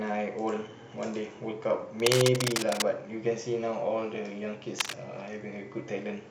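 Speech with cable scratch noise: dense, ragged bursts from 2.00 to 2.91 s and again from 4.79 to 4.94 s, about as loud as the speech. They are likely caused by a worn cable or connector being moved. On a spectrogram they appear as broadband vertical smears, and in the waveform as jagged, irregular spikes.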